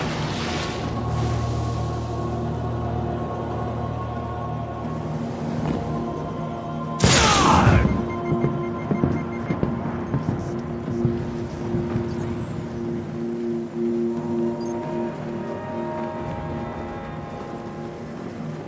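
No technical faults can be heard in this audio.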